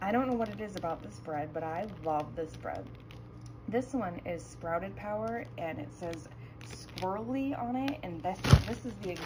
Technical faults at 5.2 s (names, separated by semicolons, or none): imaging from linear upsampling